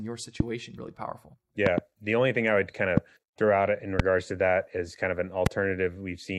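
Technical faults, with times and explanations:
0.40–0.42 s, 1.66–1.80 s, 2.97–3.00 s, 4.00–4.02 s and 5.46–5.49 s: loud pops, each peaking about 20 dB over the speech, which keeps going underneath. The one between "really powerful" and "the only thing i" is a quick double pop; the others are single, including those after "thing i would kind" and right after "throw out in". Each is a sharp electrical step, likely from a connector, switch, static or driver glitch, that the following circuitry turns into a short thump.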